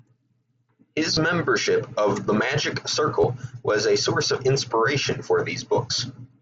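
A speech recording over a Bluetooth mSBC headset link, with concealed Bluetooth headset packet loss at 1.14–1.17 s and 3.21–3.24 s. Each 22.5 ms gap, about three lost frames, is patched with a repeat of the preceding waveform, giving a brief buzzy hold with a slight warble on recovery rather than the silent hole of a plain dropout.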